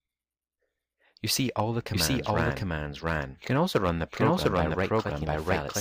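A doubled audio track runs from start to end: a second full-band copy of the sound trails the original by roughly 0.7 s at about the same level, with no decay or room colour. It was likely captured twice through a slower path, or an edit left two copies out of step.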